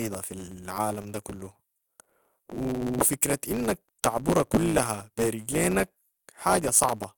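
Throughout the speech, a block size mismatch truncates each block's tail, leaving a 109 Hz buzz and delivery about 1.09 times fast at near-normal pitch. A spectrogram shows vertical striations every 9.2 ms. The waveform shows a step at each splice.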